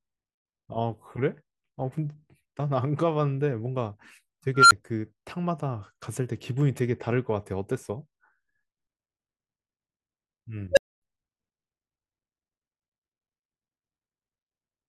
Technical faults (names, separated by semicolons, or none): unstable filter